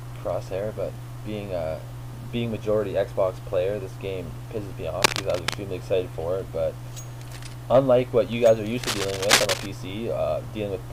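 At 5.02 to 5.55 s and again at 8.83 to 9.66 s, cable scratch noise rasps over the audio at roughly the sound's own level. These are dense, uneven bursts lasting half a second or more rather than isolated clicks, likely from a worn connector being moved.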